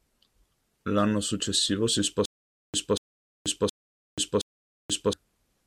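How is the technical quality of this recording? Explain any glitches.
The recording is disrupted by a stutter with silent gaps from 2.26 to 5.13 s, just after "successivo si".

A 236 ms fragment of speech repeats four times, each followed by about 483 ms of dead silence. The likely cause is a stalled stream replaying its last buffer, losing the speech in between.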